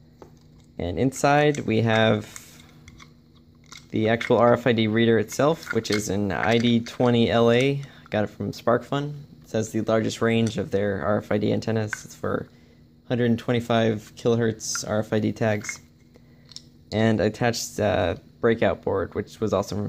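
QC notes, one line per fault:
3.97 s, dropped samples: a single sharp click, likely from roughly one missing sample, so the waveform jumps abruptly to a later value.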